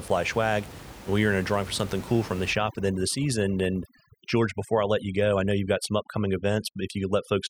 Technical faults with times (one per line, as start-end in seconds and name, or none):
2.53-7.50 overdone noise removal